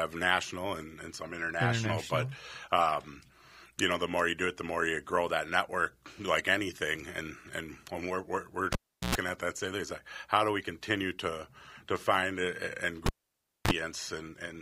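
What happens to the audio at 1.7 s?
At 1.7 s the speech carries on intact, with no dropout, click, distortion or other audible fault.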